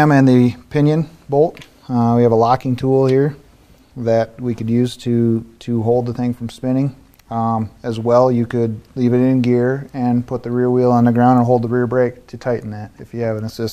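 No technical faults can be heard anywhere in this recording.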